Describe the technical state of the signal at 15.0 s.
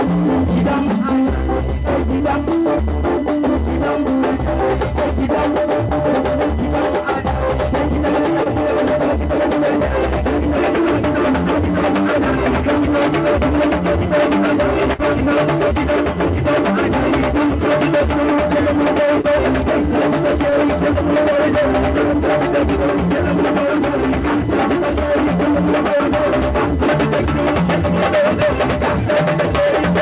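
A burst of packet loss runs from 14.93 to 15.00 s. The receiver papered over the gap by extending the last sound for about 51 ms and letting it fade into a held buzz or hiss. When playback resumes, roughly 60 ms of the original audio is missing.

USB whine is also present at this moment, as it is throughout the clip. It is a fixed-pitch tone at 1 kHz, strongest at its 2 kHz harmonic, sitting about 25 dB below the signal. It comes from the USB bus's 1 ms frame current leaking into the power or ground.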